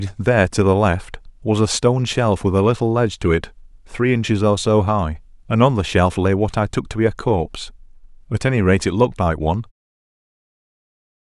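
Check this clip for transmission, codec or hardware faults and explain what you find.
No transmission, codec or hardware faults turn up in this speech, and the gentle fade-out that finishes by about 9.7 s is a normal edit.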